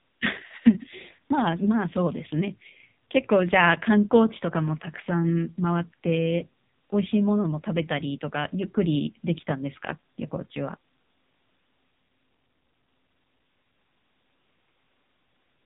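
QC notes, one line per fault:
Throughout, AMR narrowband mobile codec: heavy coding at a rate that fits 5.9 kbps models speech as coarse pulses, cutting everything above 3.8 kHz and leaving a buzzy, synthetic quality.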